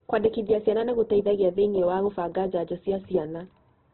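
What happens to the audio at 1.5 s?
At 1.5 s the speech carries the same damage heard across the whole clip, most likely Opus compression at a very low rate, which fits something near 12 kbps in the codec's music (CELT) mode. Starved of bits, the encoder keeps each band's energy but fills the detail with folded or noisy content, so the voice sounds grainy and rough, and muffled because nothing remains above 4.2 kHz. A spectrogram shows a hard ceiling at 4.2 kHz and smeared, noise-like texture where clean harmonics should be.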